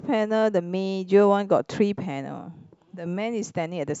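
Speech recording with no technical faults audible anywhere in the clip.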